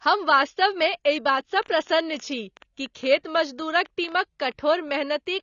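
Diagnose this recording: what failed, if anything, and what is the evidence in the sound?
The codec stage shows plainly audible damage throughout the speech. Nothing is present above 7 kHz, and the sound is dull and smeared with a warbling, fizzy texture on sibilants. This likely comes from AAC compression, with coarse quantisation and band-limiting that fits a bitrate near 24 kbps.

From 1.29 s to 5.14 s, a train of clicks runs over the speech and through its pauses. There are around thirty similar pulses at about 6.8 per second, irregularly spaced, peaking at roughly signal level. The likely source is interference or a faulty connection injecting repeated pulses.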